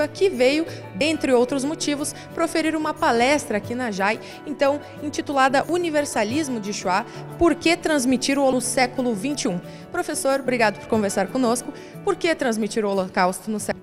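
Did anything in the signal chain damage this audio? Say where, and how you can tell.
Yes. The damage is in the compressed stream itself, at the codec or storage stage. Corrupted data at four points made the decoder misread frames, lose sync and search for the next valid frame header. Each event is a brief disturbance: from 0.98 to 1.01 s, at 8.53 s, from 10.45 to 10.48 s, and at 13.71 s. Two last about 36 ms and two only a few milliseconds, the signature of damaged data in a compressed stream.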